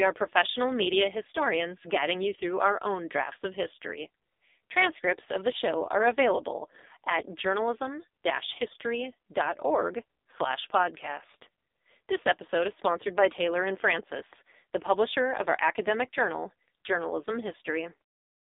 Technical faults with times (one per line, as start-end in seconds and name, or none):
0.00-18.42 AMR narrowband mobile codec